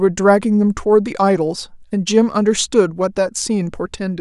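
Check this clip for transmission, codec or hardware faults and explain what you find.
Nothing in the recording points to a fault anywhere along its chain. The speech comes through with no disturbance that calls for comment.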